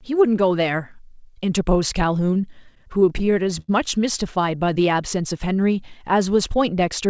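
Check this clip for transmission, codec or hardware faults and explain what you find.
Two jitter buffer faults are audible in this speech. The call codec path cuts everything above 8 kHz, which fits G.722 at 64 kbps.

From 2.26 to 3.70 s there are repeated stalls (stutter). Packets kept arriving late, so the jitter buffer ran dry sixteen times. The receiver stretched the last sound across each wait, the longest 89 ms. About 225 ms was filled, and nothing is lost. The speech drags and hiccups. A spectrogram shows short smeared, frozen spectral slices, and the waveform shows repeated or fading segments.

From 4.51 to 4.85 s the jitter buffer slows down to rebuild its reserve. It repeats single pitch periods, adding 44 ms and running at 89% speed with unchanged pitch. Sounds are drawn out. The waveform shows near-identical repeated cycles, and the spectrogram shows harmonics stretched horizontally.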